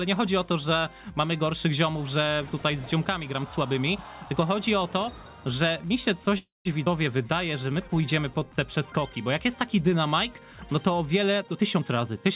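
At 6.38 s the sound stalls: the last fragment trails on as a fading buzz and then goes quiet for about 170 ms before resuming at 6.67 s. This call audio freeze was likely caused by packets held up in transit, draining the jitter buffer. The receiver padded 271 ms, so the pause was inserted and nothing was lost.

Almost immediately after, at 6.85 s, the sound lurches forward with only a tiny seam. This is a skip ahead. Roughly 70 ms of audio was discarded, most plausibly as the buffer shed the backlog from the stall, and the two sides were butted together.

From 7.17 to 8.02 s the sound drags at the same pitch, running at 92% speed, with stretched sounds. This is jitter buffer slow-down. The receiver repeated single pitch periods to rebuild its reserve, adding 76 ms in total.

From 11.42 to 12.17 s the sound turns hurried, playing at 123% speed with no pitch change. This is jitter buffer speed-up. 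The buffer held more than its target, so it snipped out short pitch-period slices, about a fifth of a second altogether. Throughout, the call path's band stops at 4 kHz, which fits a G.711 mu-law link.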